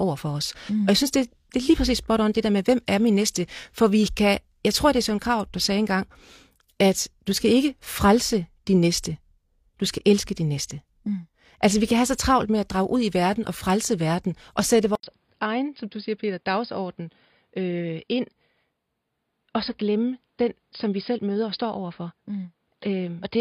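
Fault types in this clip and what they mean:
Input switched to a poorer device: At 14.95 s, after "frelse verden og sætte", the speech drops out for 80 ms. It returns dull and boxy, with nothing above 5 kHz. It is about 5 dB quieter, over a faint new noise floor. The cause is likely a different microphone or headset profile.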